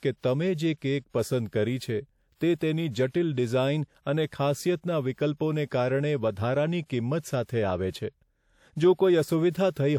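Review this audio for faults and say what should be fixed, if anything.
A short hiss creeps in just ahead of a sharp attack from 7.43 to 7.49 s, smearing its onset over about 55 ms. This is pre-echo: the transform codec spread quantisation noise sized for the loud attack across the quiet start of the block. Enabling block switching to shorter windows on transients would prevent it.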